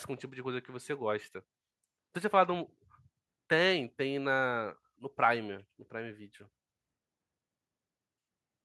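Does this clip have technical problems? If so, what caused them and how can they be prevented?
No, this clip has no technical problems, so there is nothing that caused them and nothing that needs preventing.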